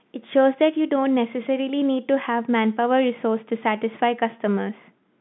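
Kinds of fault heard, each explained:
No kinds of fault are heard in the speech, which comes through the telephone band with nothing above about 3.8 kHz.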